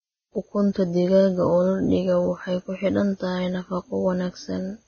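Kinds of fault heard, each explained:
Vorbis compression: heavy coarse quantisation turns treble detail into grainy hiss, with nothing above 6.5 kHz, likely Vorbis coding at about 16 kbps.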